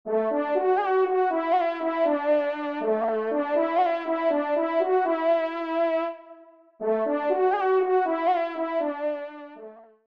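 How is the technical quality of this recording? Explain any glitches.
There's one glitch worth flagging. From 1.73 to 4.36 s there's periodic clock jitter: the converter clock wobbles at around 100 Hz, adding sidebands that give everything a rough, metallic edge.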